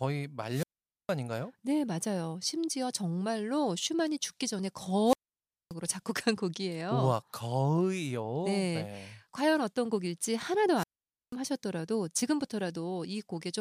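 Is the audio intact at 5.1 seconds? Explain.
No. A wireless microphone squelch dropout runs from 5.04 to 5.74 s. The radio link fades, hiss rises, then the receiver mutes about 580 ms. That muted hole after the static marks it as squelch, not a digital gap.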